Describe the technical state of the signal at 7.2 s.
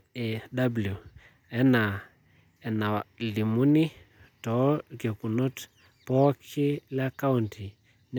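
At 7.2 s the speech signal is intact, with no audible dropout, clipping, distortion or other technical fault at that point.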